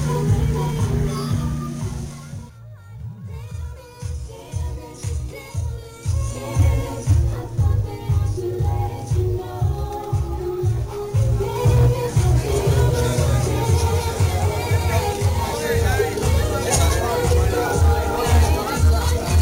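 From 12.48 to 15.12 s a doubled audio track appears: a full-band copy trails the original by about a fifth of a second, roughly 5 dB quieter, likely from a second out-of-step capture path. Unlike an echo, it never decays, carries no room colour, and cuts in and out abruptly.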